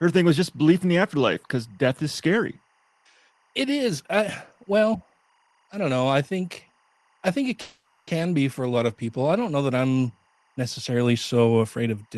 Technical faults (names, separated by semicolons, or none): timecode bleed; call audio freeze